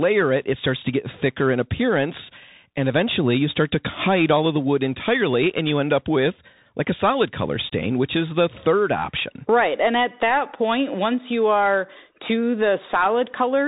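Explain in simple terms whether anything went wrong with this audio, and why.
The speech sounds narrow and phone-like from start to finish, with plainly audible damage: scratchy s sounds and a grainy hiss underneath. This is the Bluetooth CVSD headset codec, which stores sound as tiny up-or-down steps and passes nothing above about 3.8 kHz.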